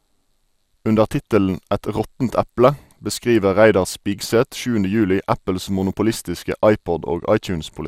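At 1.2 s, DAB burbling: bit errors slipping past error correction corrupt sub-band levels, giving a brief burble, seen as scattered isolated bright spectrogram blocks.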